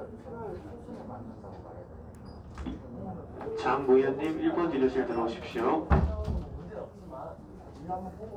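Everyday sounds, with no technical faults audible anywhere.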